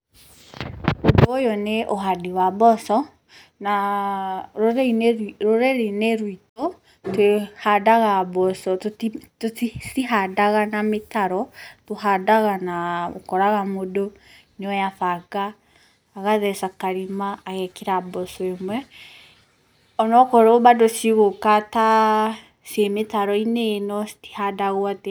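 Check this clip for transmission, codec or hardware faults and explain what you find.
One fault here: a Bluetooth stall from 6.49 to 6.62 s. The speech drops to about 65 ms of silence and resumes, likely because interference delayed packets and drained the headphones' buffer.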